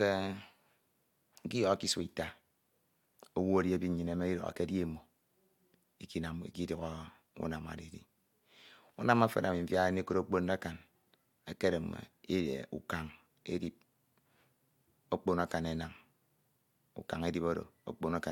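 Nothing in the recording stood out as a technical problem on listening.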